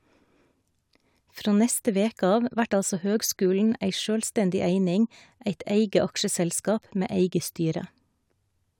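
Just speech here, and there's nothing technically wrong to point to anywhere in it.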